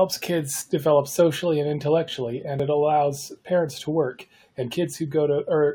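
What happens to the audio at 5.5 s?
Nothing goes wrong at 5.5 s; the speech there is intact, with no dropout, click or distortion.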